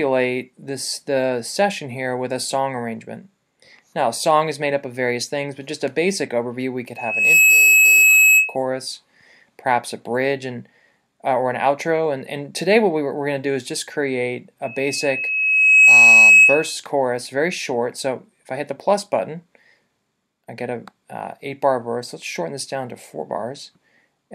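At 6.96 s a single piercing tone at 2.6 kHz swells up in about 0.4 s and rings until 8.56 s, sitting clearly above the sound. At 14.63 s the same pitch returns, creeping up more slowly over a second or two and ending louder, until 16.79 s. Both are loudspeaker feedback squeal: the microphone hears its own loudspeaker, and at 2.6 kHz the loop gain tops unity, so that tone feeds on itself.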